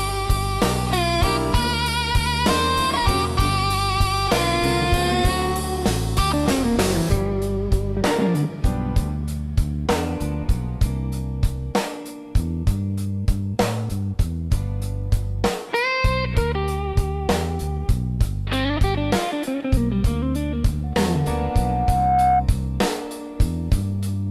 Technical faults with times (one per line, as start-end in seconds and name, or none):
20.83-22.47 loudspeaker feedback squeal